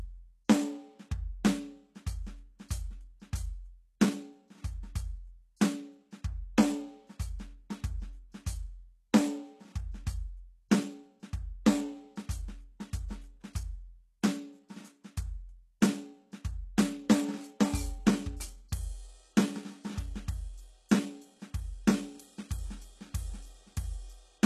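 Throughout the music the treble sounds gritty and metallic with nothing above 12.3 kHz, likely HE-AAC compression rebuilding highs from copied lower bands, fitting roughly 16 kbps.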